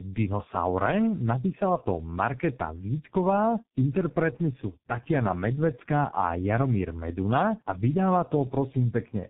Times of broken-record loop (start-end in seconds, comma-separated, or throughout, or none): none